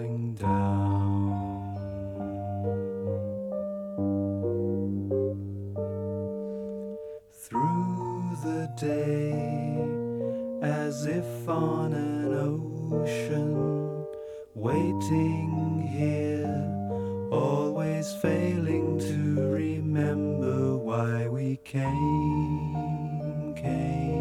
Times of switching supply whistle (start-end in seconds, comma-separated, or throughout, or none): none